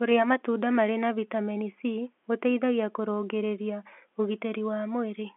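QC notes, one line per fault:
No faults are present: the speech is carried as G.711 mu-law telephone coding, which fits a 64 kbps line, with content confined to roughly 250 Hz to 3.4 kHz and any coding noise at most faint.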